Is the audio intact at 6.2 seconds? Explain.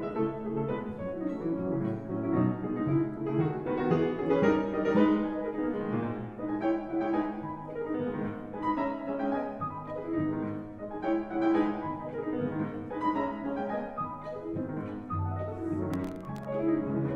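Yes, at 6.2 seconds the audio plays through cleanly, with no dropout, click, distortion or other fault at that moment.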